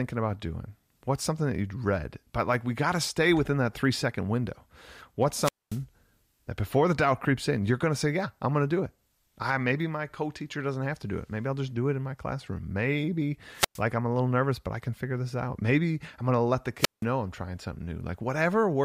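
Wireless microphone squelch dropout at 5.34–5.83 s, 13.53–13.82 s (before "I'm a little nervous") and 16.78–17.04 s: the fading radio signal brings a burst of hiss, then the receiver mutes for roughly 0.23, 0.11 and 0.17 s.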